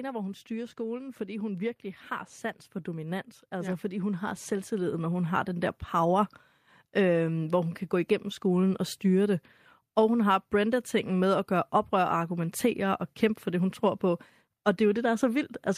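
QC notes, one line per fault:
2.96 to 6.36 s, automatic gain rising: the speech and the background noise swell together in a slow, steady climb lasting about 3.4 s, ending roughly 7 dB louder than where it began. The automatic gain control judged the incoming level too quiet and raised its gain gradually. Because that gain acts on the whole signal rather than on the talker alone, the background noise rises in step with the speech.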